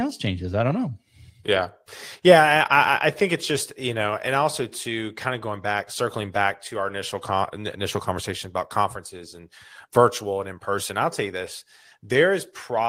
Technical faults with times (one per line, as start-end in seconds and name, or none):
none